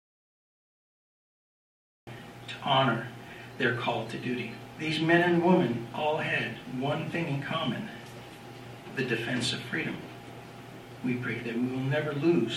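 The clip opens in dead silence, with no room tone at all, until the sound cuts in abruptly at 2.07 s. This is an audio dropout to silence, likely from the input being disconnected or muted while the recorder kept writing silence.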